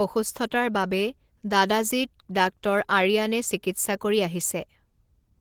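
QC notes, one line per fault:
throughout, Opus voice compression: the coder runs at a low rate that fits roughly 16 kbps, pairing linear-prediction coding below 8 kHz with a sparse upper layer. Its coarse excitation coding makes the speech plainly hoarse and slightly robotic, although content still extends to about 20.2 kHz.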